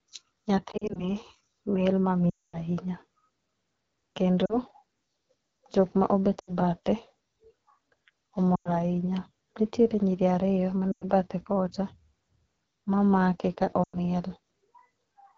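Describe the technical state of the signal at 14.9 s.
At 14.9 s the speech is still passing through an AMR wideband (HD Voice) codec. The coding damage is plainly audible and runs through the whole clip. It sounds rough and raspy because at about 8.85 kbit/s the pulse-driven vocal tract model can't keep up. Above 6.4 kHz there's only shaped noise.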